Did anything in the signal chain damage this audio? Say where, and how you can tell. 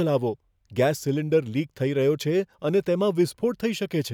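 No, nothing audible in this speech recording points to damage at any stage of the signal chain.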